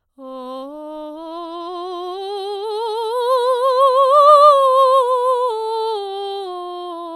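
No faults detected anywhere in this music clip.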